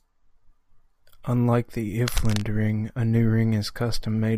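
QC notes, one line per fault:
2.08 to 2.42 s, cable scratch noise: a dense, uneven burst of scratchy rustling sits over the speech, about 10 dB below it, ending just before "a new". Likely a worn cable or connector being moved, its contact resistance fluctuating rapidly.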